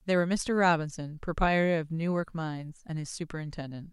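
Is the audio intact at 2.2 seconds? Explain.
Yes, at 2.2 s the speech plays through intact, with no dropout, click, distortion or other fault at that point.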